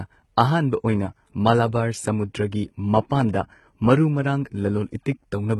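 A speech clip whose upper spectrum sounds synthetic throughout: sibilants come out gritty and lispy, and the treble has a metallic sheen that doesn't follow the voice's harmonics. The likely cause is heavy HE-AAC compression, where spectral band replication rebuilds the treble from copied lower bands under a coarse envelope, and the damage fits a bitrate around 16 kbps. On a spectrogram the top region appears as blocky, repeated patches above a sharp crossover, with harmonics misaligned across it. At 3.33 s there is pre-echo: a short hiss of about 14 ms precedes an attack, which sounds softened. The codec spread its quantisation noise across the whole block, so noise sized for the loud onset leaks into the quiet moment before it. The waveform shows a noise smear just ahead of the transient, and the spectrogram shows a thin broadband haze before it.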